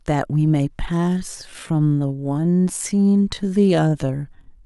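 A speech clip with a time-stretched section running from about 0.93 s to the end, where the audio plays at roughly 0.68 times its original pace while the pitch stays put. The slowed speech drags, most likely from software repeating short pieces to lengthen it. On a spectrogram the harmonics keep their spacing but stretch sideways. The waveform shows drawn-out syllable envelopes.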